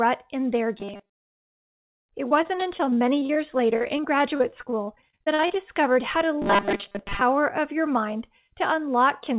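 From 0.80 to 1.23 s, just after "in their", the speech turns into a rigid metallic buzz at 200 Hz. This is robotic sound from repeated short buffers, likely caused by audio arriving too seldom so that the last 5 ms was replayed over most of the span. From 2.29 to 5.56 s, ending just before "how to", repeated packet loss leaves dozens of short holes, the longest about 43 ms. Each is patched by stretching the preceding sound, concealing about a fifth of the stretch and leaving choppy, robotic speech with pieces missing. From 6.42 to 7.22 s, right after "how to", the same 200 Hz buzz returns, likely from the same repeated short buffers. Throughout, the telephone-style call path keeps everything below 4 kHz.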